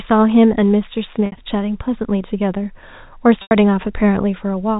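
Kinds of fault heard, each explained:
Packet loss with pitch repetition: Gaps of 60 ms at 1.26 s and 90 ms at 3.42 s are bridged by repeating the last pitch period, which fades within 50 ms before the speech returns.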